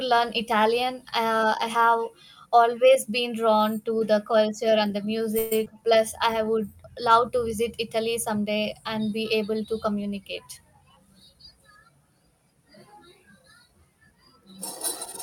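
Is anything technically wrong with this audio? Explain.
Yes, the clip, which is speech, has four network playback faults, three packed together just after 5 seconds and one later.

From 5.38 to 5.52 s there is a call audio freeze. Packets were likely held up in transit, so the jitter buffer ran dry. The receiver stretched the last sound into a fading buzz or hiss lasting 130 ms, and then the speech resumed where it had stopped, with nothing lost but delay added.

From 5.64 to 5.67 s comes short concealed packet loss. About 50 ms of audio never reached the decoder, and only 11 ms was synthesised to cover it, so the hole was mostly closed up, cutting the delay by roughly 40 ms. It is heard as a brief smear or wobble.

From 5.74 to 6.46 s a jitter buffer slow-down follows. The buffer was rebuilding its reserve by repeating single pitch periods, adding 59 ms in total. The speech plays at 93% speed at unchanged pitch, so sounds are slightly drawn out.

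From 10.42 to 11.60 s there is a jitter buffer speed-up. The buffer held excess audio, so the receiver trimmed around 150 ms in small pitch-period pieces. Speech runs at 112% speed with the same pitch and sounds noticeably hurried.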